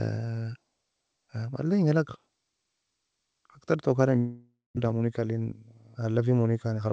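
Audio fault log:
4.18–4.79 s: long network dropout. The speech stops being delivered for about 0.6 s. The receiver stretches the last sound into a fading buzz that lasts almost the whole gap, and about 0.19 s of plain silence follows. Speech then resumes, but roughly 0.4 s of it is simply gone. The likely cause is a stall in packet delivery, with the late audio arriving together afterwards and adding around 150 ms of delay.
4.86–5.83 s: jitter buffer speed-up. Right after the gap, the speech runs about 11% fast while keeping its normal pitch. The receiver is draining the backlog that built up after the stall. It cuts out many short slices, each one or a few pitch periods long, about a tenth of a second in total. The result sounds hurried, as if the talker briefly rushed.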